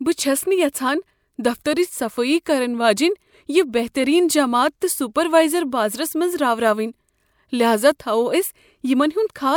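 No faults are audible anywhere in the speech recording.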